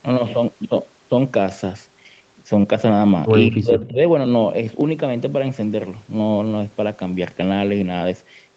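Between 2.61 and 2.65 s there is a short concealed packet loss: about 20 ms of audio never arrived in time, and the receiver covered the hole by extending the preceding sound before blending back into the real signal. It is heard as a brief smear or wobble in the speech. On a spectrogram the harmonics flatten into a stretched, slightly blurred patch for that instant. The waveform shows a short repeated-looking cycle where the real detail is missing.

From 3.5 to 3.99 s the speech drops sharply, by about 25 dB at its deepest, for roughly half a second. This pattern is most likely speech suppressed in double talk, where an echo canceller, unable to tell the near talker from loudspeaker echo while both sides spoke, pulled the level down. The voice sounds ducked. The waveform envelope sags visibly across that span, and the spectrogram fades, with the upper bands stopping at 8 kHz throughout.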